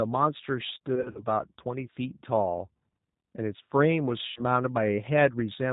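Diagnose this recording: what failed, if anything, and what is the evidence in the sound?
The codec stage failed: the whole clip carries plainly audible G.729 coding. Speech is cut off at 4 kHz and sounds rough and synthetic, rebuilt from a vocal tract filter and pulse excitation, which fits an 8 kbit/s G.729A link rather than simple low-pass filtering.

The network stage shows VoIP packet loss concealed by the speech codec at 0.95 to 1.26 s (100 ms lost, scattered over 200 ms, longest run 40 ms) and 4.28 to 4.42 s (80 ms lost). Unlike hard dropouts, there is no silence: the decoder stretches its last pitch and filter into a fading sound, and speech stays weak just after.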